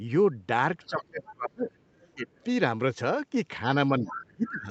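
From 0.87 to 1.78 s the speech is suppressed in double talk. The level dips hard, by about 30 dB at its deepest, and pieces of the speech drop out for about 0.7 s in total. Both sides were likely talking at once, and the echo canceller turned everything down because it could not separate the talker from the loudspeaker echo.

Inside that span, from 1.21 to 1.31 s, the other side's voice leaks through. It sits about 25 dB below the speech. Another scrap comes from 1.95 to 2.14 s, fainter, about 35 dB down. The echo canceller likely left some of the loudspeaker sound in the microphone signal.

From 2.15 to 2.28 s a second, shorter suppression follows. It is milder, about 15 dB, and lasts about 150 ms.

At 2.34 to 2.44 s there is a very faint leak, about 40 dB below the speech.

From 4.0 to 4.69 s the suppression returns, dropping the speech by about 25 dB for about half a second in total. 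Within it, from 4.05 to 4.22 s, the leak is at its clearest, only about 15 dB below the speech. The missing bass comes from the call's normal microphone processing, and the missing treble above 8 kHz comes from the normal Opus call path.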